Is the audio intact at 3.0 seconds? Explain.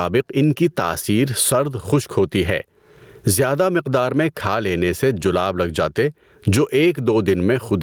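No. Gain pumping runs through the whole speech clip, including 3.0 s. Gain likely set far too high, with a fast limiter clamping each loud sound, so the gain swings by around 20 dB. The waveform looks flattened.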